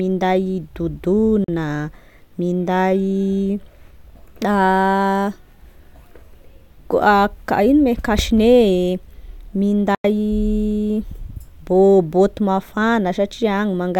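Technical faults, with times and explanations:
1.44–1.48 s and 9.95–10.05 s, Bluetooth dropout: speech cuts to sudden silence for 40 ms, then 93 ms, and resumes further along, likely from wireless packets arriving too late.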